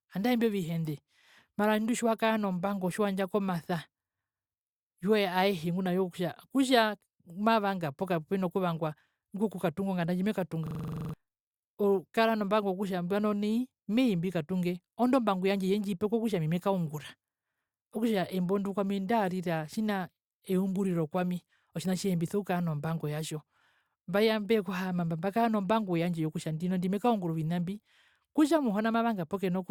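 System hang loop, 10.67 to 11.14 s: a freeze left one 43 ms chunk looping eleven times, a 23.4 Hz stutter replacing about half a second of speech.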